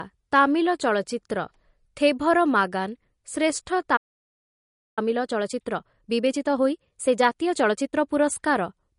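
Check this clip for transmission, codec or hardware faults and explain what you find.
Three faults are audible: codec damage throughout, a stall, and a hurried stretch after it.

Throughout the speech, the sibilants have a watery, swirling edge, likely from MP3 compression at a low bitrate around 40 kbps. The encoder cuts the treble at a fixed point and lets weak frequency lines flicker between frames. A steady band-limit like this, unlike a simple low-pass filter, comes with that warbling texture.

From 3.96 to 4.99 s, just after "ମାଗାନ' ଶ୍ରେଷ୍ଠ", the sound drops out completely for about 1.0 s, which points to a playback stall. The player likely ran dry or was blocked.

From 4.99 to 7.99 s the speech runs at 1.25 times normal speed but keeps its normal pitch. This is time-compressed catch-up, as the player trims and cross-fades small slices to work off the backlog. Unlike a resampled speed-up, the pitch does not rise.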